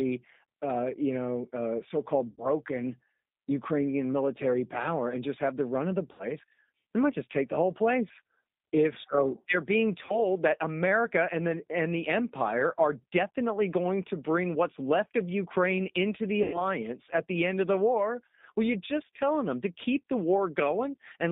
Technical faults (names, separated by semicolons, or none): G.729 codec; VoIP packet loss concealed by the speech codec